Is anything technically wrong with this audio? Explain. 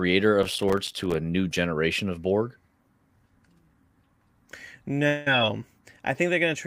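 Yes. From 0.43 to 1.14 s the speech is overrun by processor overload crackle. The processor could not finish its small audio buffers on time, and missed deadlines pile up over that stretch, roughly forty of them, with buffers of about 3 ms. Each missed buffer is replaced by silence with abrupt edges, so the sound turns gritty and torn, a dense crackle riding on the speech that stops once the load eases.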